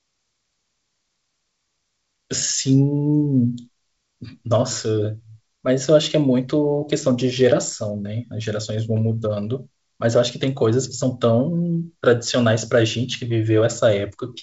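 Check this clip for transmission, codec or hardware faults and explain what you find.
No transmission, codec or hardware faults are present in this speech; it carries the expected signature of G.722 wideband telephone coding at 56 kbit/s, with nothing above about 7.7 kHz and only the light coding roughness that path leaves behind.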